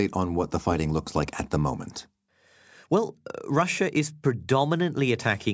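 It's a speech clip with aliasing running the whole way through. The sibilants come across gritty and metallic, because energy that should have sat above 8 kHz has folded back down below it as unrelated, wrong-pitched content. That fold point fits a drop from 48 kHz to 16 kHz done without an anti-alias filter first. The folded junk sits roughly 25 dB under the speech, and the spectrum runs hard right up to the 8 kHz edge.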